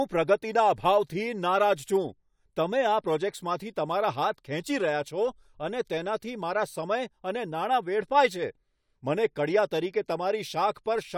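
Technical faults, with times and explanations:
Nothing technical stands out here; the speech comes across without any dropouts, glitches or other trouble to point to.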